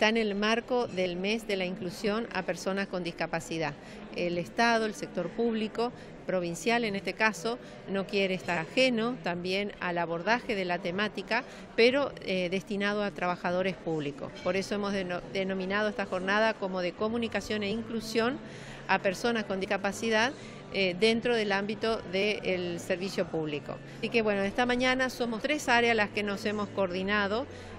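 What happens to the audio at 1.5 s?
Nothing goes wrong at 1.5 s: the audio plays through that moment intact, with no dropout, click or other fault.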